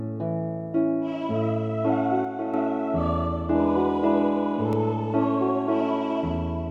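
From 2.25 to 2.54 s the level drops abruptly by about 6 dB and then steps straight back up. This is most likely one channel dropping out before the mono sum. Unlike a gain dip or fade, the drop is a clean halving with sharp edges, and anything present only in that channel vanishes completely.

At 4.73 s a block of digital silence lasting 0.67 ms, consistent with a 32-sample block, cuts the signal out and back with no fade. It is too brief to register as a hole, so it comes across as a tick or dip rather than a gap.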